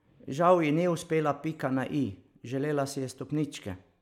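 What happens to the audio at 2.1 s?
Nothing goes wrong at 2.1 s; the speech plays through that moment intact, with no dropout, click or distortion.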